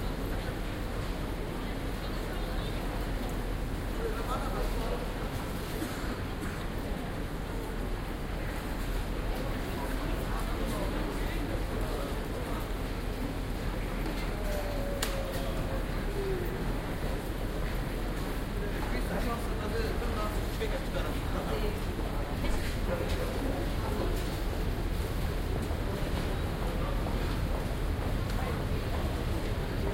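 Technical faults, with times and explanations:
11.53 s and 28.82 s, lost LE Audio frames: two tiny glitches where the LC3 decoder filled each gap by replaying the last spectrum with randomised signs. That gives a brief noisy smear rather than a click, and each gap's length fits one lost 7.5 ms frame.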